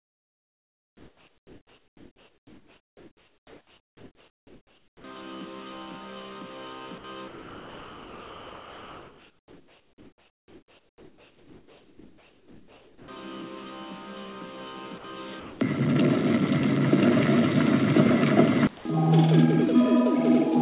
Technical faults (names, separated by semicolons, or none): comfort noise in place of the background; sound dropped by the voice detector